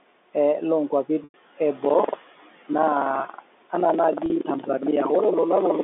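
A noise suppressor runs through the whole clip, pulling down whatever bands it judges to be steady noise by about 16 dB frame by frame. The room noise, about 19 dB below the speech, drops away in the pauses and swells back under the talking.

At 1.24 s, roughly 100 ms of audio goes missing. The receiver covers the gap with packet loss concealment by pitch repetition, looping the last pitch period while fading it. What you hear is a brief buzzy hold that sinks toward silence before the speech cross-fades back in at 1.34 s.

From 1.81 s to the end, buffer tearing sets in. The writer and the hardware reader of the ring buffer have drifted into overlap, so about a fifth of each period replays audio from around 150 ms earlier, with hard seams on both sides. That produces a steady robotic rattle at 21.5 Hz, which fits a 2048-sample buffer, and it is present only while sound is playing.

A second, shorter loss of 40 ms at 4.26 s is again filled by repeating the pitch. 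It comes across as a quick buzzy hold rather than a fade-out, all within the narrow telephone band of the G.711 line.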